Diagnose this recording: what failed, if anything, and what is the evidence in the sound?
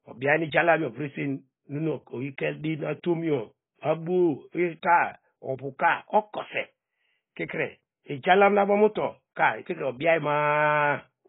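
Dull, smeared speech runs throughout, with nothing above 3.8 kHz and a fizzy, unstable texture on sibilants. This is likely AAC compression at the codec stage. Heavy quantisation and a lowered cut-off, consistent with a bitrate near 16 kbps, strip and blur the spectrum.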